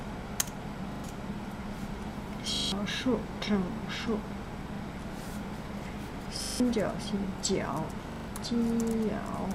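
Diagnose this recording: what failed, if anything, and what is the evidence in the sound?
At the driver or buffer stage, fresh audio repeatedly arrived late, so the device replayed its last 40 ms block: a repeated buffer fault. Hard-joined stutters of up to 0.16 s occur at 0.92, 2.56, 4.76, 6.44 and 8.12 s, each dropping up to about 0.15 s of sound.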